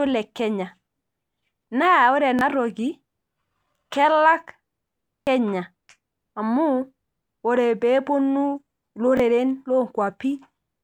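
Three brief stutters break up this speech clip, at 2.39 to 2.41 s, 5.23 to 5.27 s and 9.17 to 9.2 s, each a tiny hard-edged repeat heard almost as a click or buzz. These are repeated buffers: new audio arrived late, so the device replayed its last 21.33 ms block, which fits a 1024-sample buffer. It replayed once at the first and third points and twice at the middle one, losing roughly 20 ms, 40 ms and 20 ms of audio.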